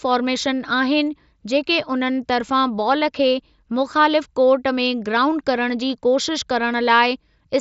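A speech recording, and nothing is technically wrong with it.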